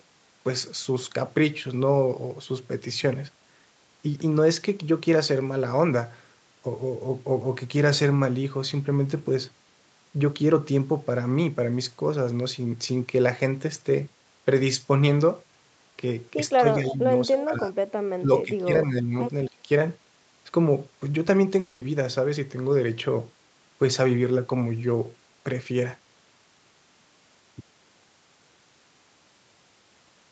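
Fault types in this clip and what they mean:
Speech suppressed in double talk: The speech level sags in three places, at 16.59 to 17.02 s, 17.28 to 17.73 s and 18.19 to 19.15 s, by about 10 dB in the first two and about 15 dB in the last. This is likely an echo canceller that could not tell the near talker from loudspeaker echo while both sides spoke and so attenuated everything. On a waveform the envelope visibly shrinks in those spans. On a spectrogram the energy fades across bands for a few hundred milliseconds at a time.
Echo leak: Around 17.40 to 17.45 s a faint, delayed copy of the speech slips through, lagging by 221 ms and sitting about 15 dB below the direct signal. The likely cause is a loudspeaker-side echo canceller leaving a residue that was sent back down the line. On a spectrogram it shows as a weak repeat of the harmonic pattern shifted right by roughly a fifth of a second. 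In the waveform it is a brief low-level smear rather than a clear second burst.
Long network dropout: From 21.59 to 21.83 s roughly 0.22 s of real audio never arrived. The receiver likely covered the gap entirely with concealment, stretching the last sound into a fading buzz or hiss rather than leaving silence. When the stream resumes, the missing stretch is simply gone. On a spectrogram the gap looks like smeared, repetitive, gradually dimming bands with no new articulation. On the waveform it appears as a decaying stretch before normal speech returns.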